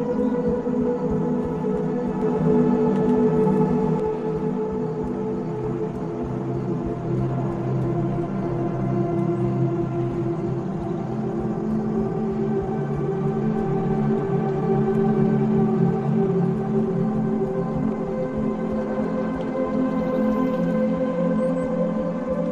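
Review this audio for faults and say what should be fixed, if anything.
From 2.22 to 4.00 s, an equally loud, dry copy trails about 150 ms behind: a doubled audio track, likely from a second, slower capture path. To prevent it, route the source through a single capture path and mute any duplicate inputs before recording.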